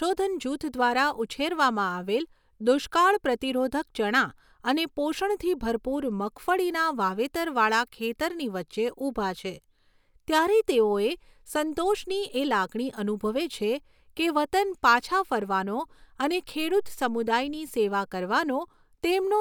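A speech recording with nothing technically wrong to report.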